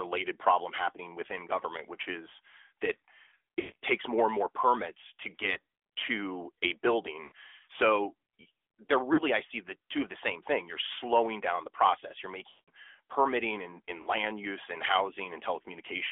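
AMR narrowband mobile codec runs throughout: the sound is confined to about 300 Hz to 3.5 kHz, with a plainly buzzy, synthetic edge from the coarse vocal-tract model and pulse excitation, which fits AMR-NB at around 10.2 kbps.

Lost AMR speech frames occur at 3.60 to 3.76 s, 5.54 to 5.58 s (after "and more permits to", before "to a"), 7.24 to 7.33 s (after "to a"), 9.14 to 9.21 s, 12.50 to 12.70 s (before "permitting and") and 14.02 to 14.09 s. Frames failed their checksum, so the decoder repeated its last pitch and spectral settings at falling gain. The 20 ms gap is a brief warble, and the longer runs of up to 180 ms smear and fade toward silence.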